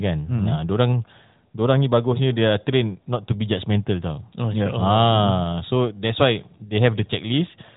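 Speech carried over an AMR narrowband mobile codec, band-limited to about 3.8 kHz as expected for that path, with no technical fault audible anywhere.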